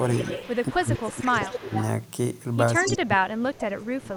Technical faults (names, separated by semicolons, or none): echo leak; speech suppressed in double talk